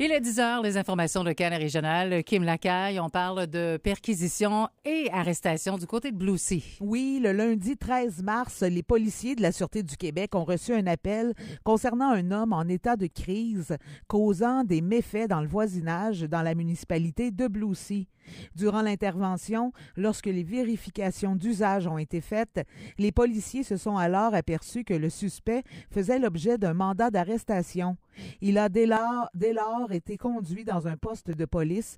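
From 28.97 to 31.33 s there's channel delay with comb filtering: one side lands roughly 10 ms late, and summed to mono the shared content cancels at evenly spaced frequencies, first notch down around 40 Hz, so everything turns hollow and phasey.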